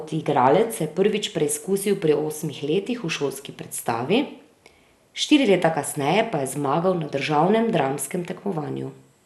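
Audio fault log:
throughout, MP2 compression: dull, gurgling speech; the spectrogram shows blocky sub-bands flickering on and off, empty above 12.1 kHz, likely low-rate MP2 coding near 80 kbps.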